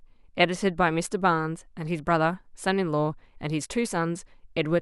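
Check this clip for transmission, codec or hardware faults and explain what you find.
Nothing wrong turns up anywhere in the speech.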